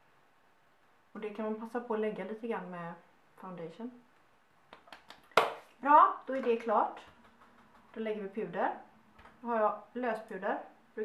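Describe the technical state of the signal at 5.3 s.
The signal at 5.3 s is intact, with no audible fault at that moment.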